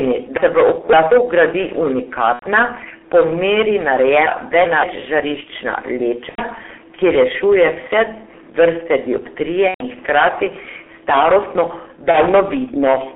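Hard clipping runs throughout. The level is pushed about 18 dB past full scale, so a sizeable share of peaks are cut flat, giving harsh fuzz on every loud syllable.

The G.723.1 codec is also present throughout, at 6.3 kbit/s. Its band of 250 Hz to 3.5 kHz sounds muffled and hoarse. Consonants are smeared.

Packet loss concealed by the speech codec appears at 2.33 to 2.45 s, 6.29 to 6.45 s, 9.68 to 9.86 s and 12.11 to 12.18 s. The decoder stretches the last sound into a fading buzz. The gaps run about 90, 90, 120 and 30 ms.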